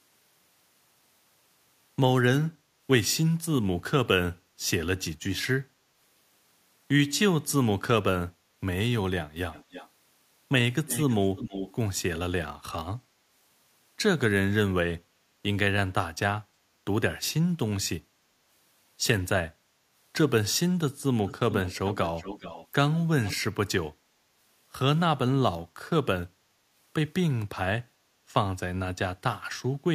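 Four echo leaks sit in this speech. From 9.52 to 9.89 s and again from 10.87 to 11.75 s, a delayed copy of the speech trails it by 318 ms, low at first and louder in the second stretch. From 21.26 to 22.67 s and at 23.24 to 23.37 s the copy returns with a 417 ms lag. This is likely a far-end speakerphone whose echo canceller let part of the loudspeaker signal back into the call.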